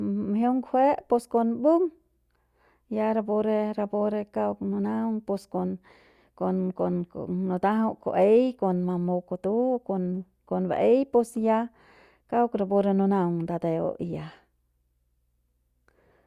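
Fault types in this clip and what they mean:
No fault types are present in this clip.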